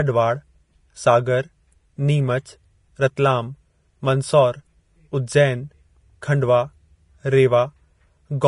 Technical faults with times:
0.00-8.47 Vorbis compression

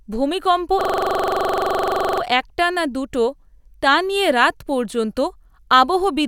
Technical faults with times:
0.81-2.22 system hang loop

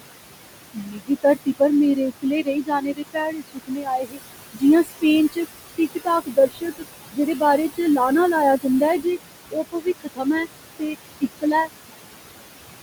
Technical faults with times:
0.00-12.82 noise suppressor artifacts
0.73-1.61 speech cut by the noise suppressor
1.96-4.20 speech cut by the noise suppressor
4.52-5.38 speech cut by the noise suppressor
5.78-7.98 speech cut by the noise suppressor
9.51-10.47 speech cut by the noise suppressor
10.79-11.70 speech cut by the noise suppressor

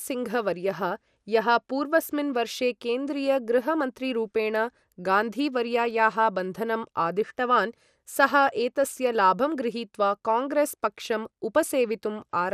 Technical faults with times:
0.00-12.54 MP2 compression

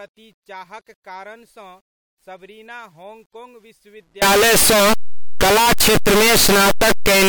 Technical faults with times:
4.22-7.29 signed and unsigned mixed up

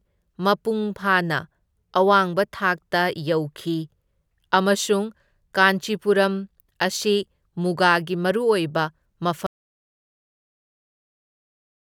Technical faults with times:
9.46-11.99 audio dropout to silence

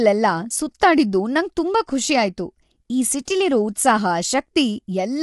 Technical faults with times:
0.00-5.22 low-delay AAC compression

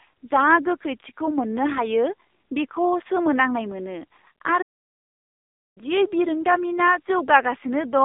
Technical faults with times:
0.00-8.04 AMR narrowband mobile codec
4.61-5.78 playback stall

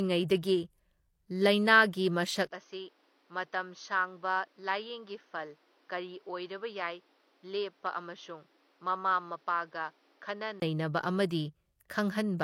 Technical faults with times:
0.00-12.43 low-bitrate audio saved at a high bitrate
2.49-10.62 input switched to a poorer device

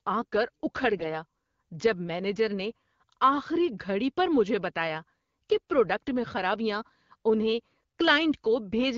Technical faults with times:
0.97-1.08 AMR bit errors

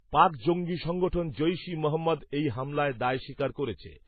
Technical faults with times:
0.00-4.07 transcoding between lossy codecs

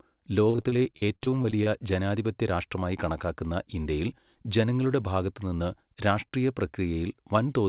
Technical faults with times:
0.50-1.68 repeated packet loss (robotic sound)

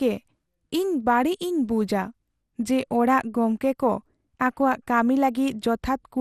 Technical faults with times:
0.00-6.21 generation loss

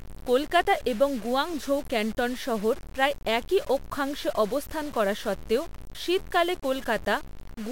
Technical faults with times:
0.00-7.71 low bit depth without dither

